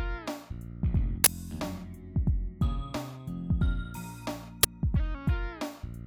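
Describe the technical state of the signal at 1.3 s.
Around 1.3 s the signal carries an uninitialised buffer fault, spanning 1.24 to 1.27 s. A block of about 23 ms, which fits a 1024-sample buffer, was played before audio was written into it, so stale memory contents came out as a brief, loud burst of digital noise.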